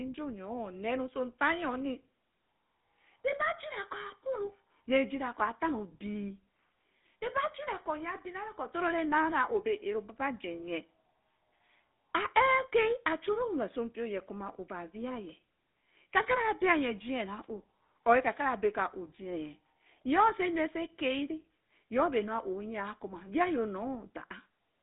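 From start to finish the speech runs through a GSM full-rate codec, and the damage is plain: a buzzy, gravelly roughness from the pulse-driven vocal-tract model, consistent with a 13 kbps stream. The line band sits around 200 Hz to 3.6 kHz, with nothing above 3.8 kHz.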